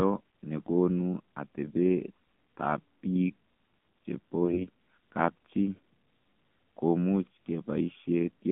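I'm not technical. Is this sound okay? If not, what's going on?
No. AMR narrowband mobile codec damage runs through the whole speech clip: it was squeezed through an old-style phone codec that rebuilds the voice from a simple model and drops everything above about 3.4 kHz, so it sounds muffled, buzzy and somewhat artificial.

AMR bit errors strike from 4.45 to 4.67 s. A weak connection scrambled some of the less protected information, so the voice keeps its pitch and loudness but briefly turns hoarse, scratchy and gargly.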